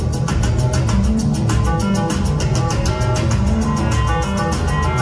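Nothing in the clip stands out as a technical problem, and there's nothing here worth flagging.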